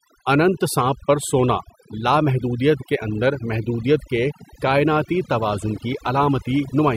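A speech clip with overdone noise removal throughout: aggressive band-by-band suppression leaves near-silent gaps with twinkling specks and a spectrogram showing scattered isolated blobs.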